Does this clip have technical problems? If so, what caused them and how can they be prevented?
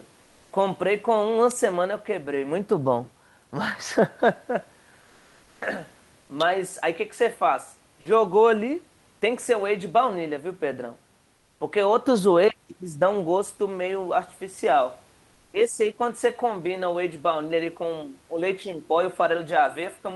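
Yes. Comfort noise in place of the background: from 5.05 to 5.59 s and 11.35 to 11.59 s, the room's textured hiss turns flat and featureless, about 2 dB quieter in the second gap. The likely cause is Opus discontinuous transmission pausing during silence, with the receiver synthesising noise. Disabling DTX prevents it.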